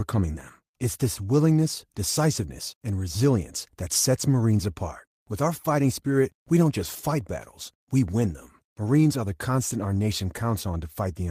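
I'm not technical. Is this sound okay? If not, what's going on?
Yes, it's fine: nothing in this speech recording is glitching or broken, so there's nothing to worry about.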